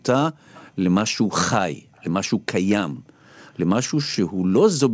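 From 1.95 to 2.04 s a faint delayed copy of the speech comes back, an echo leak, trailing the original by about 239 ms and sitting far below it, roughly 35 dB down. It was likely caused by a far-end loudspeaker whose echo canceller let a scrap of its microphone pickup through. On a spectrogram it shows as a pale ghost of earlier speech patterns, offset in time. The waveform barely changes. Like the rest of the clip, it stops at 8 kHz, consistent with a G.722 call path.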